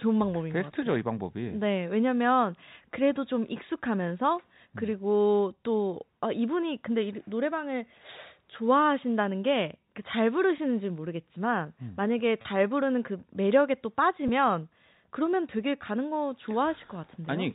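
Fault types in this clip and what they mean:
Packet loss with pitch repetition: a brief held, buzzy sound at 12.42 s (30 ms) and 14.28 s, as lost packets were bridged by repeating the last pitch period.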